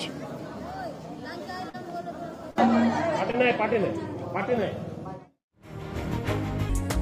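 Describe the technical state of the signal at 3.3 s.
A short concealed packet loss spans 3.31 to 3.35 s: about 20 ms never arrived, and the decoder extrapolated the preceding sound to fill it, leaving a brief smear.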